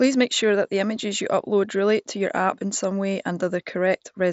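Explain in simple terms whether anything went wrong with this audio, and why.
Nothing went wrong here.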